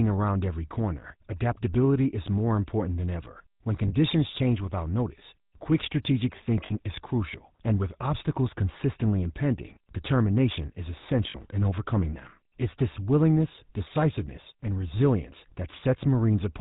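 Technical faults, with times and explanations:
Throughout: GSM full-rate codec. The speech has been squeezed through the original GSM full-rate coder, which fits a 13 kbps stream. It builds the voice from a vocal-tract filter fed by a sparse train of regular pulses, so the damage is plainly audible as a buzzy, gravelly roughness. Nothing survives above 4 kHz. On a spectrogram the energy stops flat at that line, and harmonics look smeared and grainy rather than cleanly striped.
3.88–3.94 s, 6.66–6.73 s and 11.3–11.37 s: lost GSM frames. At each of these three points about 40 ms of signal went missing, which suggests two dropped frames each time. The decoder filled the gap by reusing the last good frame's settings, so the sound freezes into a short metallic ring instead of a gap. On a spectrogram each shows as a brief band of static, repeated texture.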